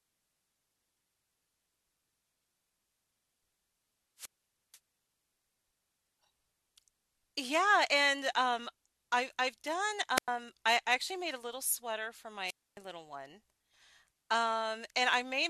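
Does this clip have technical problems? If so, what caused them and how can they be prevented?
Yes. Wireless microphone squelch dropouts at 4.17–4.79 s, 10.16–10.28 s and 12.46–12.78 s: the radio signal fades, hiss rises, and the receiver's squelch mutes the speech for about 0.49, 0.10 and 0.27 s. Prevent this by keeping a clear line of sight, placing receiver antennas closer, and choosing an interference-free frequency.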